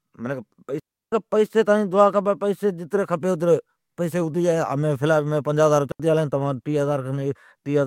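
At 0.80 s the speech drops into a digital wireless dropout lasting about 0.33 s, ending at 1.12 s just before "کیلی تانجی دعا کھپی". A second, 78 ms dropout follows at 5.92 s, right after "مین پنجاھ ھزار". Each time the receiver lost too much data and muted with a very fast fade, leaving clean near-silence with no noise burst around it. On a waveform this is a flat gap; on a spectrogram, a blank vertical band across all frequencies.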